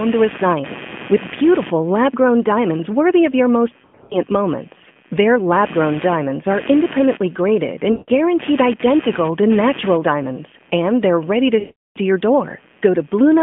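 Computer activity noise runs through the whole clip: a buzzing chirp pulsing around 150 Hz, roughly 20 dB below the speech, rising and falling with the computer's load rather than with the sound, unlike steady mains hum. Lost AMR speech frames hit the narrowband phone audio at 3.83 to 4.16 s (scattered, longest gap 80 ms), at 7.92 to 8.10 s between "diamonds are independently graded" and "identical to natural diamonds", and at 11.60 to 11.98 s. In each case the decoder stretches the last sound into a fading warble rather than cutting to a clean dropout.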